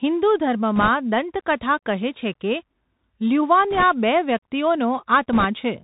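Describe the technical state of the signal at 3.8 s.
At 3.8 s the signal carries the Bluetooth CVSD headset codec, present across the whole recording, with damage plainly audible. CVSD encodes speech as a stream of single up/down steps whose size adapts to the signal, consistent with a 64 kbps headset link. Nothing above 4 kHz survives, so the speech sounds narrow and boxy. Fast, loud high-frequency movement outruns the step size and distorts, s sounds turn scratchy, and a fine granular hiss sits under the voice.

Overlapping that moment are bit errors on a Bluetooth voice link, from 3.71 to 3.83 s, at a rate of a few percent. In CVSD each bit moves the waveform by only one small step, and the adaptive step size lets a wrong bit's effect fade quickly. The errors therefore produce no sharp clicks. Instead they add a rushing, crackly noise over the speech for that brief stretch.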